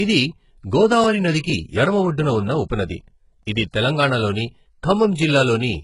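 A speech clip carrying heavy HE-AAC compression damage from start to finish: sibilants sound gritty and metallic, the treble sounds synthetic, and nothing reaches above 11.1 kHz. This is likely caused by spectral band replication at a very low bitrate, consistent with roughly 12 kbps. On a spectrogram the upper band would show blocky, copied patterns ending abruptly at the 11.1 kHz cutoff.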